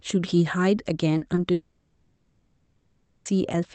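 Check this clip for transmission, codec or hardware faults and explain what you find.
Three transmission faults are audible in this speech clip, arriving over a call path whose Opus coding tops out around 8 kHz.

Short concealed packet loss occurs twice, at 1.17–1.23 s (about 40 ms) and at 1.35–1.39 s (about 20 ms). Each time, audio failed to reach the decoder in time, so the receiver extrapolated the preceding sound and then crossfaded back into real audio, producing a brief smear or wobble. On a spectrogram, the preceding sound runs flat and slightly blurred across each gap. The waveform shows no sharp break.

A long network dropout is the likely cause of the stretch from 1.53 s to 3.27 s, about 1.7 s. The receiver kept synthesising from the last received sound, so a buzzy hiss continues and fades rather than dropping to dead silence. Speech then resumes with the lost portion simply missing. 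A spectrogram shows a smeared, decaying band with no fresh formant movement. The waveform shows a tapering envelope, not a flat gap.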